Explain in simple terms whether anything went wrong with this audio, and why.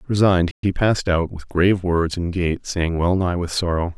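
At 0.51 s the speech cuts out for about 120 ms, then resumes at 0.63 s. This is a playback stall, likely the player briefly running out of data.

From 0.63 to 1.43 s the speech sounds rushed, about 1.15 times normal speed with unchanged pitch. This time-compressed catch-up happens as the player trims tiny slices to make up lost time.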